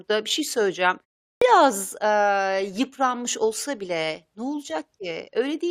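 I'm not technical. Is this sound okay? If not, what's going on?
No, not quite. At about 1.36 s, right after a short gap of roughly 0.4 s, the speech comes back in abruptly, with its first sound missing. That's a clipped start after a pause: the playback device dozes off during the quiet bit and takes a moment to wake up again, so the first 55 ms or so, up to about 1.42 s, simply get swallowed before anything comes out.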